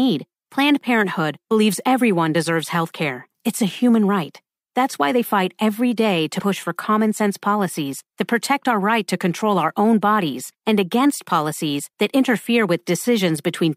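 At 6.36 to 6.41 s, between "they fight every day" and "for common sense policies", and again at 13.03 to 13.06 s, just after "against policies that interfere", the speech is briefly disrupted by damaged data in a compressed stream. Corrupted bytes throw the decoder out of sync until it finds the next valid frame. On a spectrogram and waveform each appears as a brief disruption.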